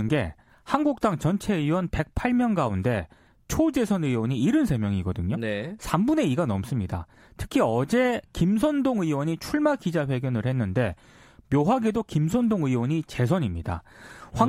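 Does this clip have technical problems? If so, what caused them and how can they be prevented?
No, nothing in this speech clip needs fixing, so there is no cause to trace and nothing to prevent.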